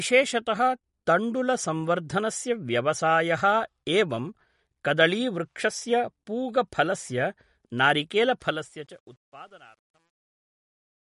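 From start to finish, the encoder has likely been starved of bits in MP3 compression. It has cut the treble and dropped weaker frequency detail that flickers in and out between frames. There is nothing above 11.2 kHz, and the damage is plainly audible: a watery, swirling quality, chirpy sibilants and smeared onsets. All of this fits a low bitrate of around 48 kbps.

At 8.41 s a digital fade-out begins, and its gain stage keeps too few bits and applies no dither, producing truncation distortion on the fade. As the smooth fade, which runs from roughly 8.4 s to 11.1 s, pulls the level toward the smallest step, the waveform collapses into coarse stairs. From 9.05 s to 11.12 s the tail turns gritty, which points to a stage only about 10 bits deep.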